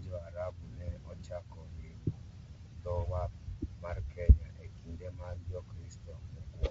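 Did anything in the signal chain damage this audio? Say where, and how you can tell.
Yes. The codec stage damaged it throughout. The speech sounds rough and grainy, with a hiss-like fill between the harmonics and an upper band that sounds thin and synthetic, all plainly audible. That is likely low-delay AAC compression, AAC-ELD as used in video calls. Its short frames cannot separate closely spaced pitch harmonics well and spend more bits per second, and the grain points to a low bitrate of around 32 kbps.

At the network or decoder stage, a brief patch from 3.50 to 3.59 s turns smeared and noisy, losing the clean harmonic structure around it. That is AAC frame loss with concealment. Audio went missing, and the decoder rebuilt the gap from the last good spectrum with randomised phase, so noise replaces detail. About 60 ms of missing audio fits two lost frames, and the gap is too short for a fade to silence.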